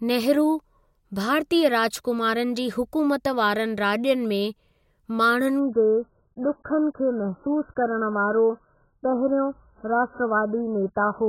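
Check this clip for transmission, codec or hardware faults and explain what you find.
One transmission fault is present. Adaptive stream at a lower bitrate, 5.59 s to the end: the slowed connection forced a far cheaper encoding, so the treble vanishes above 1.7 kHz and the speech turns muffled and smeared, which fits roughly 8 kbit/s AAC.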